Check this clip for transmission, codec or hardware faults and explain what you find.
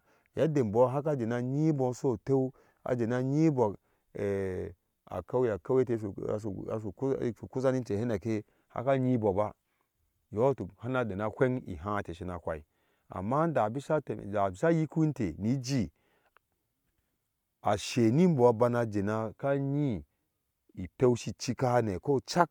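No faults detected here.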